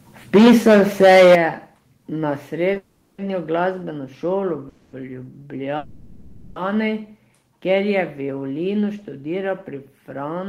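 Speech recorded with the microphone input set far too hot opens with a microphone overload, likely from a capture gain that pushed peaks into the converter's ceiling. From 0.34 to 1.35 s the loudest parts sit about 11 dB beyond full scale, and roughly a fifth of the samples in that span are flattened, so the speech carries a harsh, gritty crackle on every strong syllable.

The call software then appears to react with microphone volume stepped down, likely its automatic gain control cutting the device's input level in single jumps. The whole signal, background included, drops abruptly by about 2 dB at 0.36 s, by about 10 dB at 1.35 s just as the distortion ends, and by about 2 dB again at 2.37 s. Each drop is heard as a sudden step in loudness.

At 2.73 s there is a short stall from a late packet. One packet missed its playout slot, the jitter buffer emptied, and the receiver stretched the preceding sound by 20 ms until the packet arrived. 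Nothing is lost, but that instant is held slightly too long, with a slight buzz or dip.

The longer interruptions are call audio freezes, likely caused by packets being held up in transit long enough to drain the buffer completely. The freezes run from 2.77 to 3.20 s (410 ms, ending in a brief 20 ms silence), 4.69 to 4.95 s (240 ms), and 5.77 to 6.58 s (790 ms). In each one the last sound is drawn out into a fading buzz or hiss, and the speech then resumes exactly where it stopped. Nothing is missing, but these inserted gaps break up the rhythm of the speech.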